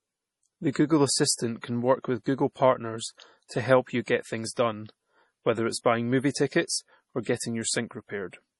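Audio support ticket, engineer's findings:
MP3 compression, throughout: heavy watery, swirly artefacts, nothing above 11.4 kHz; likely a low-bitrate encode, around 32 kbps, cutting treble and dropping weak frequency lines frame to frame.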